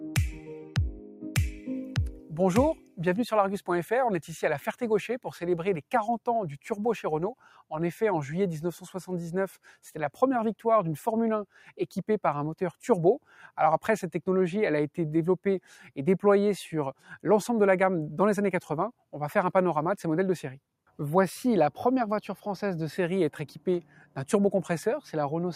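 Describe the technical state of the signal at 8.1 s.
At 8.1 s, a noise suppressor applied to music or sounds is at work, as it is for the whole clip. Built for speech, it treats sustained tones and tails as noise. Attacks pass, held sound sinks by about 5 dB, so the level pumps and thins.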